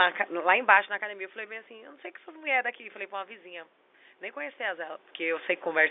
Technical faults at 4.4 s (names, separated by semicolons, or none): none